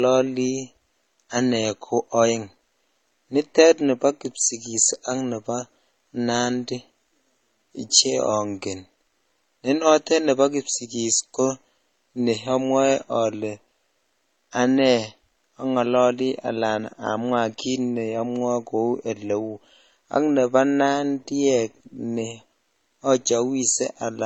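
Throughout, the speech carries two kinds of coding damage at once: the dull, smeared top of a low-rate MP3 beneath the metallic, swirly highs of HE-AAC. That stacking, unlike a single codec, points to transcoding between lossy codecs, likely MP3 near 32 kbit/s re-encoded around 40 kbit/s.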